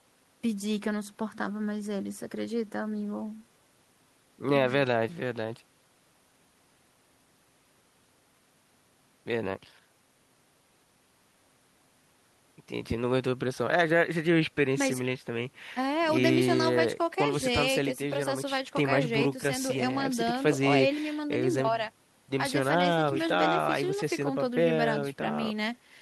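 No technical faults can be heard anywhere in the speech.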